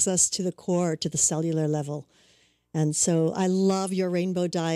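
Resampler restarted on every block, throughout: each 40 ms block, likely a 44.1 kHz to 48 kHz conversion, was converted alone, leaving edge errors heard as 25 Hz ticking under the speech.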